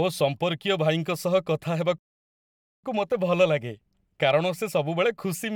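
At 1.98 s the speech cuts out into silence for about 0.85 s, until 2.84 s: a playback stall, likely the player starving for data or its thread blocking.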